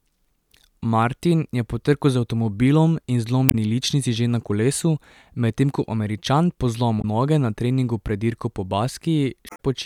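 At 3.46 to 3.55 s, between "trku z avtomobilom in" and "ličnici že na kolesu", then at 6.98 to 7.05 s, just before "noge na treningu", and again at 9.46 to 9.60 s, the speech briefly breaks up from damaged data in a compressed stream. Corrupted bytes make the decoder misread frames and lose sync until it finds the next valid header. A spectrogram shows brief disruptions cutting across the speech harmonics, and the waveform shows abrupt discontinuities at each edge.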